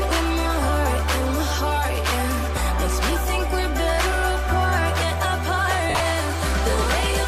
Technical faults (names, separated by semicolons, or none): lost LE Audio frames